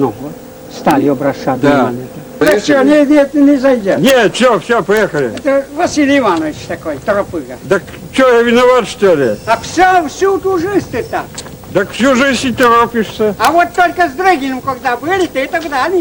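Violent, sharp cracks burst out on loud peaks at 0.91 s, 2.47 to 2.52 s, 4.08 to 4.10 s, 4.97 s, 12.63 s and 13.45 to 13.47 s. This is integer overflow: the peaks went past the largest integer value and wrapped around to the opposite sign instead of being limited.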